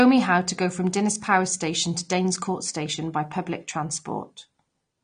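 Throughout the speech, nothing sounds above about 9.7 kHz, and the top end is dull, with smeared, fizzy sibilants and a warbling texture on sustained sounds. This is likely AAC compression, AAC-LC at a low bitrate that fits roughly 32 kbps.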